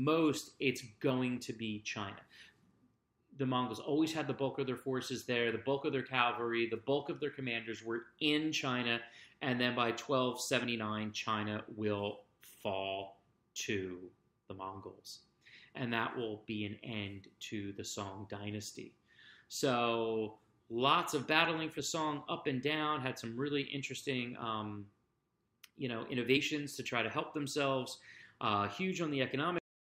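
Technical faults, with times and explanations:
10.64 s, 21.78 s and 26.36 s: compressed frames skipped. At each point the audio jumps forward slightly. About 20 ms goes missing at 10.64 s and 26.36 s, roughly one frame. About 70 ms goes missing at 21.78 s, around three frames. The jump fits a 23.2 ms frame length. Those frames were lost from the stream or rejected by the decoder as damaged.
29.58 s: cut-off end. The audio stops abruptly here, in the middle of a sound. It falls straight to digital silence with no natural decay and stays silent to the end. The final buffers were never written out or played, so the sound is chopped off. Nothing eases it down to zero.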